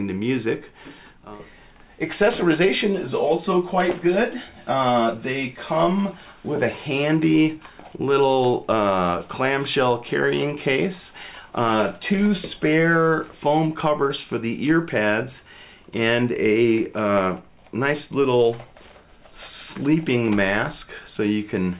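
No technical faults are audible.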